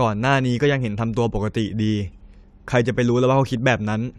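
No technical faults can be heard.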